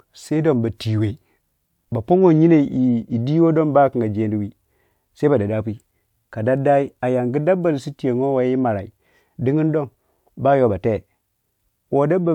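Nothing stood out as a technical fault when listening to the recording.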